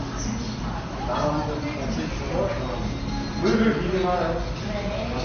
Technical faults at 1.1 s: MP3 compression

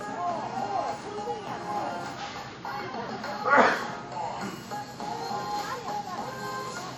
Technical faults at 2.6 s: WMA compression

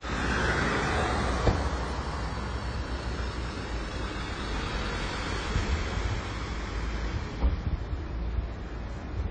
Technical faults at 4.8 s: AAC compression

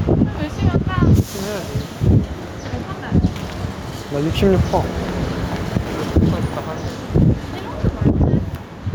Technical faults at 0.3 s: gain pumping

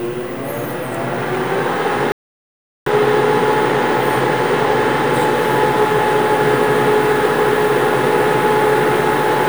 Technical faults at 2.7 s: playback stall

